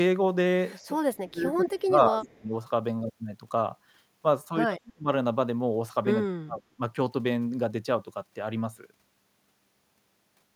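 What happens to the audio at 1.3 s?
At 1.3 s the speech sits inside a stretch of speech suppressed in double talk, running from 1.16 to 2.52 s. The echo canceller was likely faced with both sides talking at once and, unable to tell the near talker from loudspeaker echo, turned everything down. The speech dips and drops out in pieces, falling at its deepest by about 25 dB, with roughly a second of the span affected in total.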